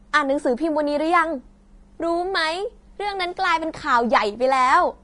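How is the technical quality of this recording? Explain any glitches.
Technical quality is fairly poor, with one problem running the whole way through. Across the entire speech, the sound is hissy and grainy, with nothing above 10.6 kHz and blurred consonant attacks. That's likely Vorbis compression at a low setting, around 32 kbps by the sound of it. The codec cuts the top end and quantises the remaining treble so coarsely that fine detail turns into noise.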